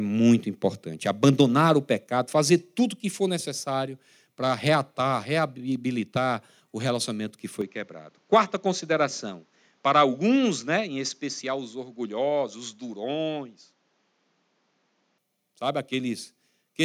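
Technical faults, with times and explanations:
7.61–15.18 s, input switched to a poorer device: after "reabilitar o relacionamento que" the sound turns dull and quieter, likely a different microphone; the spectrogram loses its top band and the waveform shrinks.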